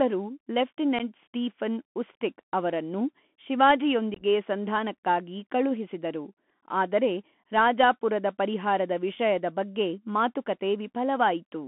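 Throughout the speech there is a muffled, boxed-in sound with nothing above about 3.4 kHz and little below 200 Hz. A grainy hiss sits under everything, s sounds turn scratchy, and louder bright passages break up. This is the Bluetooth CVSD headset codec. It codes the audio one bit at a time as a step up or down with an adapting step size, which fits a 64 kbit/s narrowband link. Fast high-frequency movement outruns the step and distorts.

From 0.99 to 1.01 s there is a tiny hard-edged dropout, just before "ಸ್ಟೀಫನ್ ಉಸ್ಟಿಕ್ ಅವರನ್ನು". This is unconcealed Bluetooth headset packet loss. About 11 ms of audio, a few short voice packets, never arrived, and nothing filled the gap. Between 4.14 and 4.23 s, leading into "ಸಂಧಾನಕ್ಕಾಗಿ ಕಳುಹಿಸಿದರು ಆದರೆ ರಾಜಾಪುರದ", the same fault recurs more heavily. About ten packets, 45 ms in total, drop out across a 75 ms stretch, with the longest hole 18.8 ms. The result is a brief rough, chopped crackle.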